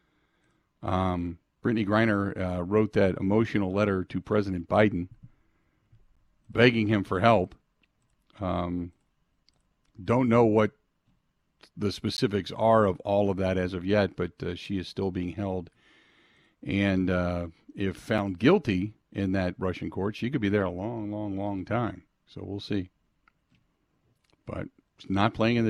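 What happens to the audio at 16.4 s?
Nothing goes wrong at 16.4 s; the speech there runs through cleanly, with no dropout, click, distortion or other fault.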